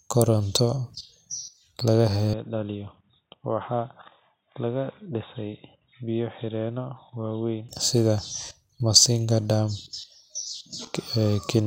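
At 2.33 s the speech abruptly turns dull and boxy, with nothing above 3.8 kHz. The level drops by roughly 10 dB, and a faint new background noise sits roughly 50 dB below the voice. There is no gap at the changeover. At 7.69 s the full, brighter sound returns just as suddenly. The likely cause is an input switched to a poorer device mid-recording, a narrower-band microphone or headset call profile with its own tone and noise, before switching back.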